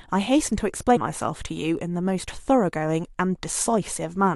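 Compressed frames skipped at 0.95–0.97 s in this speech clip: about three 23.2 ms frames never play, so the audio jumps ahead around 70 ms.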